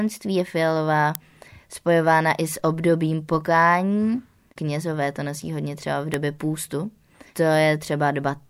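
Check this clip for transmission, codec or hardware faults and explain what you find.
Two hardware-type faults are present in the speech. At 1.15 s and 6.14 s there is an electrical switching spike: a sharp snap peaking near −5 dBFS, likely from a nearby switch arcing into the audio line.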